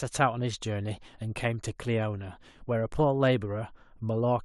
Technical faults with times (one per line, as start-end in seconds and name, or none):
none